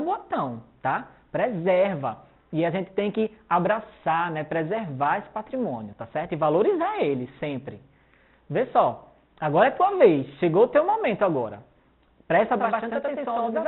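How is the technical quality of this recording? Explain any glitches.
One fault affects the recording, and only at the very end. The sound also passed through a G.711 mu-law call path, which leaves nothing above 4 kHz.

From 12.59 s to the end at 13.68 s there is a channel delay (doubling). One channel falls behind the other by about 92.9 ms, which fits a 4096-sample buffer, and the two are then summed to mono. The late copy arrives at the same level as the original, so instead of blending it is heard as a distinct doubling, a single slap echo trailing each sound for those last second or so.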